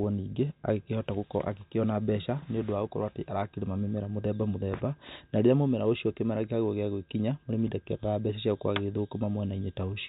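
This speech clip has no technical faults; it carries the narrow band of fixed-line telephone audio, which fits G.711 A-law coding at 64 kbps working as intended.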